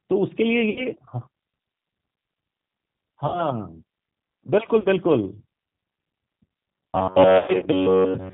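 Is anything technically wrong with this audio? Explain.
Yes. Three kinds of fault can be heard in this speech.

The whole clip passes through a G.729 codec at 8 kbit/s. It rebuilds speech from a vocal tract filter, a pitch predictor and a few pulses in each 10 ms frame. Nothing above 4 kHz gets through. The damage is plainly audible. The voice sounds narrow, slightly rough and synthetic. Its fine texture is replaced by a modelled approximation.

VoIP packet loss concealed by the speech codec occurs four times. The gaps are at 0.70 to 0.88 s, 3.28 to 3.44 s, 4.80 to 4.87 s and 7.38 to 7.69 s. About 60 ms is missing in each of the first two, and 40 ms in the third. The last spreads 180 ms of loss over 280 ms, with the longest run near 100 ms. That fits groups of 20 ms packets going missing. The decoder extrapolates from its last pitch and filter and lowers the gain. So the voice is stretched into a fading buzzy tone or coloured noise. 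It stays weak briefly after real audio returns.

From 6.74 s to the end, the voice turns into a rigid, metallic buzz. A fixed pitch near 94 Hz is forced onto it. This is robotic sound from repeated short buffers. Essentially all of that stretch is repetition. The likely cause is fresh audio arriving too seldom, with the last slice of about 10.7 ms replayed in its place. One over that length gives the buzz frequency. It overlaps the final packet-loss episode.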